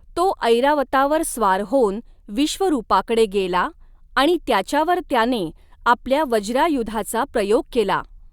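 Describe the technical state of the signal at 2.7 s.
The audio is intact at 2.7 s, with no dropout, distortion or other technical fault heard at that moment.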